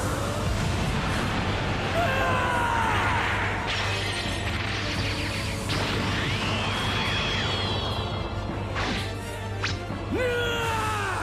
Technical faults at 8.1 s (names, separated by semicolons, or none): mains hum